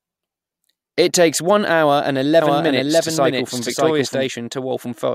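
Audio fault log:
2.42–4.26 s, doubled audio track: a second full-band copy of the speech trails about 0.7 s behind, roughly as loud as the original. It has no decay or room colour and starts and stops abruptly. The likely cause is a slower second capture path.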